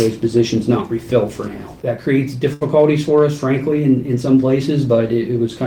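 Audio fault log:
2.53–2.63 s, short stall from a late packet: the sound is held about 75 ms while the buffer waits, then resumes where it left off. Nothing is lost, unlike a dropout.
2.79–3.23 s, hard clipping: peaks overdriven by about 1 dB are cut flat, adding brief high crackle only on the loudest moments rather than a smooth, rounded saturation.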